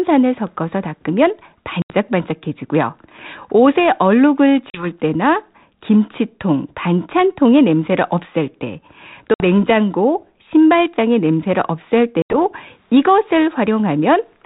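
Speech on an ADPCM call shows packet loss on an ADPCM call four times. Hard-edged silent holes fall at 1.82–1.94 s, 4.70–4.86 s, 9.34–9.43 s and 12.22–12.38 s. They hide about 80, 40, 60 and 80 ms of audio, a few packets each. After each gap the decoder's adaptive predictor and step size no longer match the sender's. The speech comes back with brief, slight distortion before settling.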